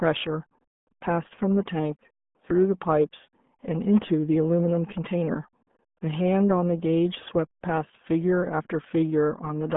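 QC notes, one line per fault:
throughout: RealAudio 14.4 codec. The speech is muffled and gargly from start to end. The sound is confined to a narrow band of roughly 150 Hz to 3.5 kHz, and nothing survives above 3.8 kHz. This old dial-up speech codec keeps only a crude model of the voice, and the heavy damage fits an 8 kbit/s stream. Consonants lose their edge, and the bubbling texture comes from the coarse coding of each short frame.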